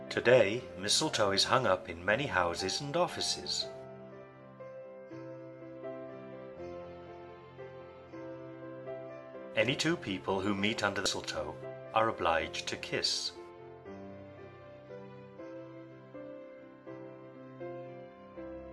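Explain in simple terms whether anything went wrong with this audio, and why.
Damaged data in a compressed stream at 11.06 s: a tiny piece of the file was corrupted, so the decoder stumbled and produced a brief blip before recovering.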